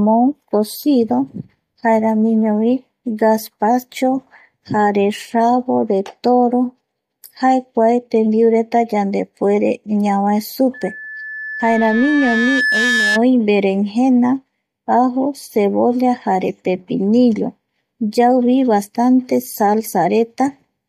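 From 10.74 to 13.21 s, loudspeaker feedback squeal: a 1.7 kHz tone swells over roughly two seconds to match the speech level, ending just before "oi verengena".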